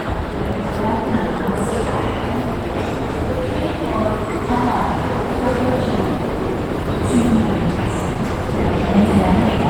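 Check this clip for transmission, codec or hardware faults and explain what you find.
One codec fault runs through the whole clip. Opus compression likely causes it. The damage is plainly audible from start to end. The sound turns hoarse, rough and somewhat muffled. Content still reaches about 20.1 kHz, so the band is not cut. The texture points to the encoder's hybrid speech mode at a low rate, near 16 kbps. Too few bits are spread across the bands, and detail gives way to grain.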